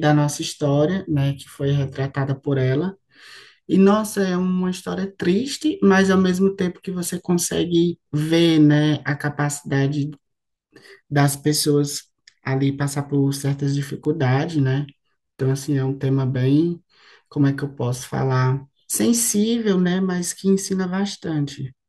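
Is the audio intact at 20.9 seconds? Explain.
Yes, the speech at 20.9 seconds plays through intact, with no dropout, click, distortion or other fault at that moment.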